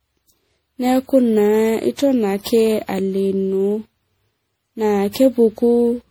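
Generation loss runs through the whole speech clip. It sounds swirly, hollow and smeared, with blurred consonant attacks, likely from about ten repeated MP3 encodes at 64 kbit/s.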